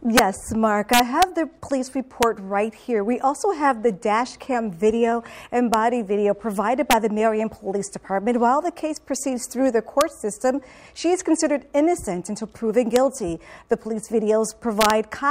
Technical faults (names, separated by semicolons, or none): integer overflow